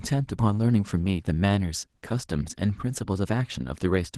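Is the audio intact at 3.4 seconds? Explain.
No. At 3.4 seconds the speech carries Opus voice compression, which runs through the whole clip. The coarseness suggests hybrid coding, with linear prediction below 8 kHz and a transform layer above, at a low rate near 16 kbps. Damage is plainly audible as a hoarse, slightly robotic roughness.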